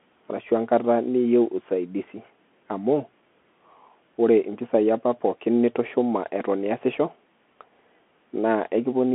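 Throughout the speech, a Bluetooth CVSD headset codec holds the sound to a 200 Hz to 3.4 kHz line band, with nothing above 3.8 kHz. Its one-bit, 64 kHz coding adds granular hiss and scratchy s sounds, damage a clean telephone band-limit would lack.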